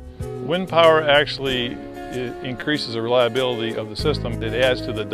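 At 1.38 s, 2.60 s and 3.99 s there are repeated buffer faults: new audio arrived late, so the device replayed its last block of about 5.8 ms, which fits a 256-sample buffer. The block plays twice at 1.38 s and 3.99 s, and four times at 2.60 s, where roughly 20 ms of sound goes missing. Each is a brief click or buzz. The waveform shows identical cycles with hard joins, and the spectrogram shows a thin vertical stripe.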